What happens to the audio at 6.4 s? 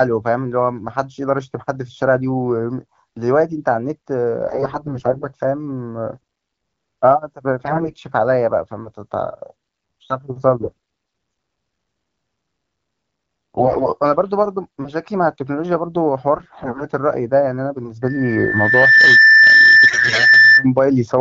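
Nothing goes wrong at 6.4 s: the speech there is intact, carried by the AMR wideband (HD Voice) codec at 12.65 kbit/s with no fault at that moment.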